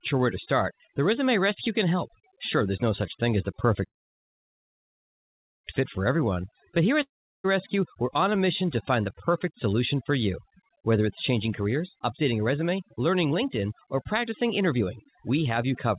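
Throughout the speech, overdone noise removal leaves the voice over a near-silent background; the spectrogram shows scattered isolated specks between words and ragged, gappy harmonics. From 3.86 to 5.66 s, just after "such thing as the", a call audio freeze, likely from delayed packets draining the jitter buffer, inserts about 1.8 s of waiting that is almost entirely silent, with nothing lost once speech resumes; the waveform shows a flat gap. After "but here at", from 7.02 to 7.46 s, a long network dropout, likely packets never arriving, brings a brief fading tail and then silence, and about 0.42 s of speech is skipped, visible as a flat stretch followed by an abrupt restart. From 11.32 to 15.86 s, a jitter buffer speed-up trims short pitch-period pieces repeatedly, running the speech about 8% faster at unchanged pitch and removing roughly 0.4 s, so it sounds hurried while the harmonic spacing stays the same on the spectrogram. 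Above all of this, the narrowband call codec leaves an empty band over 4 kHz.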